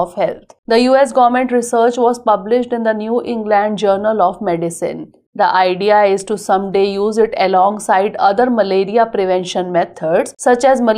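Careful listening turned up nothing that stood out as a technical problem anywhere in the recording.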